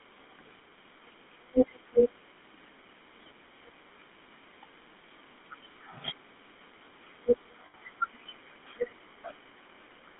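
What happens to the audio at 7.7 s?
From 7.66 to 7.75 s there is a short dropout from lost GSM frames. For about 80 ms the decoder had no usable data. It filled the gap by repeating the settings of the last good frame. The gap fits four missing 20 ms frames. The sound there is a brief, rough, metallic ring. It holds rather than continuing, and the gap is too short to fade fully to silence.

The whole clip, including this moment, also carries the GSM full-rate codec. Its buzzy, gravelly roughness is plainly audible. The band runs from about 200 Hz to 3.6 kHz, so nothing higher survives. This fits the 13 kbps GSM full-rate codec.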